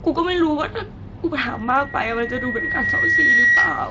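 A short speech recording, passed through a Speex path that tops out around 7.6 kHz, develops loudspeaker feedback squeal from 1.45 s right to the end. A steady tone near 1.9 kHz swells over roughly two seconds until it sits about 10 dB above the speech. The mic is hearing the loudspeaker it feeds, and at that one frequency the loop gain has crept past one, so the tone keeps feeding itself and the loop is never broken before the clip ends.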